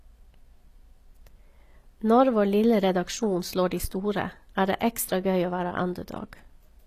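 Throughout the speech, the treble sounds synthetic: s sounds turn gritty and metallic, and nothing is present above 15 kHz. This is likely HE-AAC compression, where upper bands are copied from lower ones rather than coded, which fits a low bitrate near 24 kbps.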